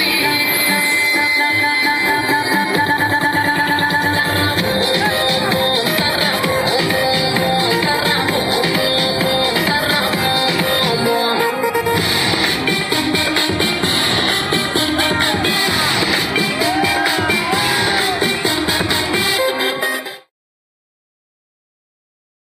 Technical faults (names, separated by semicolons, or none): none